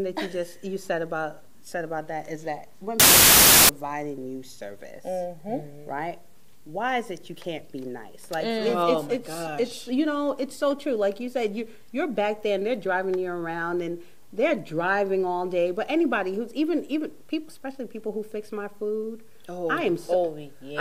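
Samples built from the wrong bytes occur from 3.00 to 3.69 s, a burst of roughly 0.7 s. For that stretch the sample values are assembled incorrectly, with the bytes misaligned or taken in the wrong order, so the rapidly changing low-order bits end up as the dominant part of each value. The result is loud, harsh broadband noise, close to white on the louder sounds.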